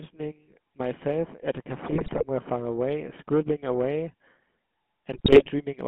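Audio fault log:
Throughout, GSM full-rate codec: the speech has the gritty, buzzy roughness of the old 13 kbps GSM coder, plainly audible. The coder rebuilds the voice from a vocal-tract filter fed by sparse, regularly spaced excitation pulses, so fine detail turns into a rasp. The line is limited to roughly 150 Hz to 3.4 kHz. On a spectrogram energy stops sharply above 3.4 kHz and there is almost nothing below 150 Hz, with smeared, grainy harmonics in between.
1.86–2.25 s and 5.13–5.49 s, GSM bit errors: two bursts of about 0.4 s each where the speech breaks into squawks, pops and gargling. Roughly 4% of the bits arrived flipped, which points to around eighteen corrupted frames per burst. Damaged filter, pitch and gain values distort the spectrum and make the level jump frame by frame. On a waveform these show as sudden spikes and blocky amplitude steps. On a spectrogram they appear as vertical bands of misplaced, smeared energy.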